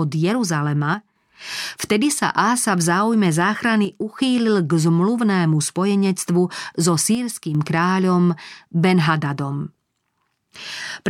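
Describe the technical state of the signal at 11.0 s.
At 11.0 s the speech signal is intact, with no fault audible at that moment.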